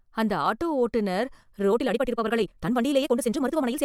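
From 1.67 s to the end, right after "அந்த ஆட்டோ ஓட்டுனர்", the speech suddenly rushes ahead at about 1.87 times its earlier pace while the pitch stays put, giving a rushed delivery. This is a time-stretched section, likely from software squeezing the audio to fit a shorter length, discarding short slices of the waveform so the duration shrinks without raising the pitch.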